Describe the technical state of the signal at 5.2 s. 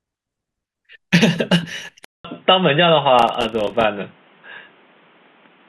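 At 5.2 s the sound is dull and narrowed, with nothing above 3.8 kHz and a faint new noise floor some 35 dB down. This has held since a 200 ms gap at 2.05 s, and the likely cause is the input switched to a poorer, narrower-band device.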